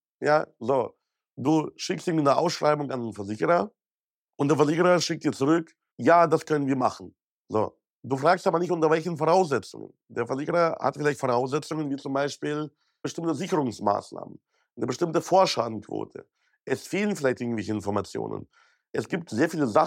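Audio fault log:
0.16–19.84 s, clock slip clicks: a fast, even rattle of tiny ticks, about twenty per second, rides on the speech and is clearest on loud, bright stretches, vanishing in pauses. Each tick is a single sample dropped or repeated, likely because two devices run on unmatched clocks about 400 ppm apart. The metronome-steady spacing and constant tiny size set it apart from random crackle or dropout clicks.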